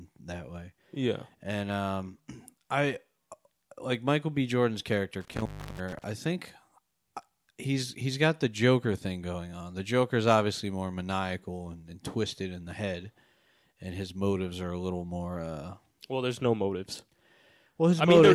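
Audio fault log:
5.21–6.04 s, intermittent contact: a loose connection somewhere in the cable or plug breaks and remakes its circuit within this span, with the line fully open for about 334 ms. While the contact is broken, no signal reaches the recorder, so the speech drops out abruptly. The metal surfaces scraping apart and together produce crackle at both edges, and faint hiss remains in the gap until the connection is restored.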